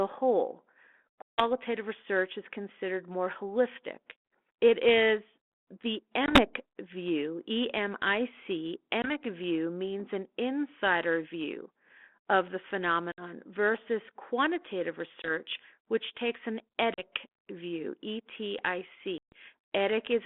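Packet loss on an ADPCM call punches silent holes into the speech at 1.22 to 1.44 s (about 160 ms lost, several packets), 6.26 s after "is the", 9.02 s, 13.12 s between "insider view of the" and "versus quantitative", 15.22 s, 16.94 s after "which takes an", and 19.18 to 19.33 s (about 140 ms). Each hole shows as a flat, near-silent gap in the waveform and a sharp-edged blank column on the spectrogram. The 32 kbit/s G.726 decoder's predictor and step size lose track of the sender's during each gap, so speech comes back slightly distorted for some tens of milliseconds.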